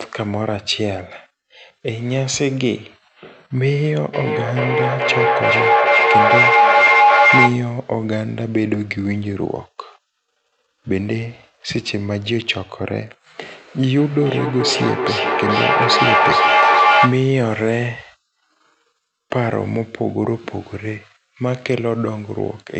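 From 4.14 to 7.87 s, a feedback howl: two devices on the call share a room, so the loop gains level each trip, building a tone near 700 Hz that pulses roughly every 0.4 s and peaks about 7 dB above the speech.

From 13.98 to 17.48 s, feedback echo between two devices: one device replays the other's microphone, which picks it up again, so speech returns roughly every 0.4 s, thinner and ringing, reaching about 5 dB above the speech.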